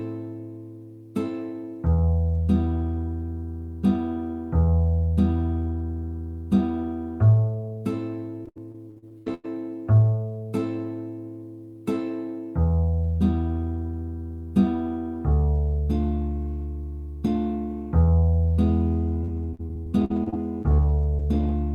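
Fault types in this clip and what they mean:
Repeated packet loss (robotic sound): Missing chunks are patched by continuing the preceding sound. This makes choppy, robotic stretches at 8.45–9.46 s and 19.24–21.51 s.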